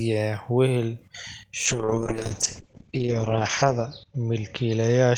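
From 1.67 s to the end, a call bitrate drop takes the encoder from 40 to 8 kbps, bottoming out for 1.95 s, and narrows the band from 20 kHz to 8 kHz. Unlike a plain low-pass filter, the speech turns rough and watery, without packet-loss gaps.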